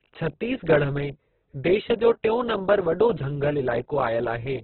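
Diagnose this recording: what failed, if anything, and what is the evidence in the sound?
The failure sits at the codec stage: heavy Opus compression, likely at a very low bitrate in the region of 8 kbps. Throughout the speech the top end is gone, with nothing above about 4.4 kHz, and what remains sounds rough and grainy. With so few bits, the encoder keeps each band's energy but fills its detail with noise or folded copies of lower bands. On a spectrogram this shows as a hard ceiling near 4.4 kHz, with smeared, speckled texture below it in place of clean harmonics.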